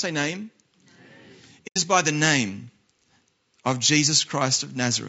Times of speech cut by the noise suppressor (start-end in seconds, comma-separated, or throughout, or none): none